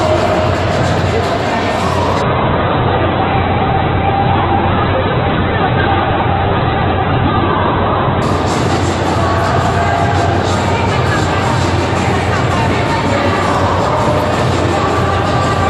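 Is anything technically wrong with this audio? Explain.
Yes. An adaptive stream at a lower bitrate runs from 2.22 to 8.22 s. The player dropped to a cheaper encoding as the connection slowed, consistent with Opus falling from 64 to 8 kbit/s. Nothing survives above 4.2 kHz, so the sound turns dull and grainy, switching abruptly without a gap.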